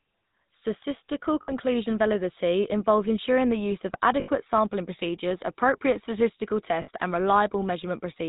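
The whole recording passed through the GSM full-rate codec. It rebuilds the vocal tract from a simple filter excited by regularly spaced pulses and discards everything above 4 kHz, which fits the 13 kbps full-rate mode. The damage is plainly audible: the speech is band-limited and dull, with the buzzy, gravelly roughness of this codec.

Lost GSM frames occur three times. Each time, the decoder stood in for the missing frames by repeating the last good frame's settings. From 1.42 to 1.53 s, just before "validity involves ensuring the", the sound holds on a rough metallic ring. A slightly longer gap from 4.20 to 4.30 s, after "ensuring the use of" and before "sampling procedures appropriate statistical", fits about four frames and rings the same way. A third gap from 6.82 to 6.89 s, right after "sampling procedures appropriate statistical", gives another brief metallic smear.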